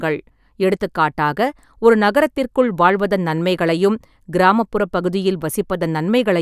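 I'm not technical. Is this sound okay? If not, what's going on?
Yes, nothing in this speech recording stood out as a problem when I listened to it.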